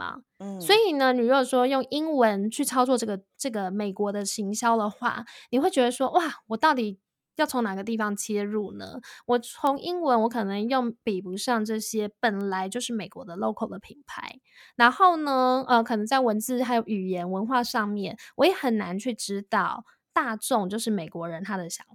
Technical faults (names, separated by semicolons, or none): bit error spike